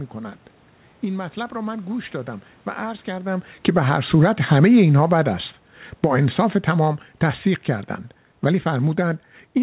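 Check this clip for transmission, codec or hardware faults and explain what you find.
Three gain-control faults appear in the speech, all coming from the automatic gain control rather than the line.

Automatic gain falling, from 3.53 to 3.96 s and again from 5.89 s to the end: the gain control judged the input too hot and wound its gain down step by step, by about 7 dB in the first case. The voice starts full, then sinks, and the room noise beneath it drops in step. This shared fade marks it as a system fault rather than the talker shifting position, which happens around 3 s.

Automatic gain rising, from 3.87 to 4.52 s: straight after the first cut, the control found the input too quiet and raised its gain by about 3 dB over roughly two-thirds of a second. Voice and background swell together, so level pumps down and then partly back up within about a second. Throughout, nothing reaches above 4 kHz, which fits narrowband telephone coding such as G.711.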